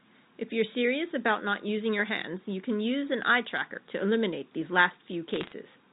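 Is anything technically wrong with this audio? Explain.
Yes. Bit errors on a digital phone line, from 5.34 to 5.52 s: flipped bits in the G.711 stream each corrupt a single sample, and hits on high-order bits, or on the sign of a loud sample, jump it far off. At a fraction of a percent, this makes a brief burst of sharp ticks over the telephone-band speech.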